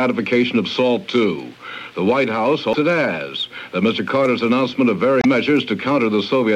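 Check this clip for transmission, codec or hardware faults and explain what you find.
There's one problem, and it shows up twice: damaged data in the compressed stream, at 2.71 to 2.75 s and again at 5.19 to 5.25 s. Bad bytes throw the decoder off its frame sync, so it garbles those frames and hunts for the next header, giving a short blip each time.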